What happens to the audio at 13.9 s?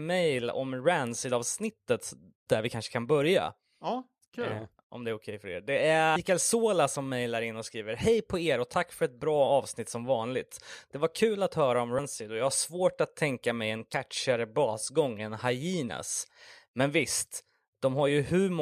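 At 13.94 s, between "att tänka mig en" and "basgång än", compressed frames are skipped. About two 32 ms frames, roughly 70 ms of speech, go missing. The audio jumps ahead by that much at the join.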